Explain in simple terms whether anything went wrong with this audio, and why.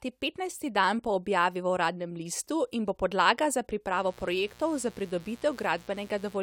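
Something did go wrong: a mains buzz comes in at about 3.92 s and lasts until 6.38 s, running underneath the speech at a low level. It sounds like a steady, raspy drone rather than a clean hum. The cause is electrical interference from the power supply, here at 60 Hz. Something like a dimmer or an unshielded cable lets sharp spikes leak into the recording twice per power cycle, adding a rough buzz that reaches well up the frequency range.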